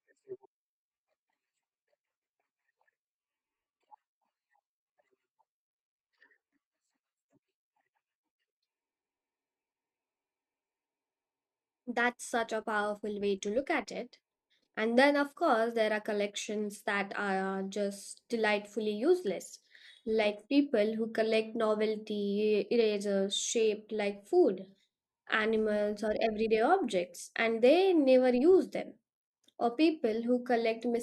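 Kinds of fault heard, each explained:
Nothing technical stands out here: the speech comes across steady and even, with no glitches, dropouts or odd artefacts to flag.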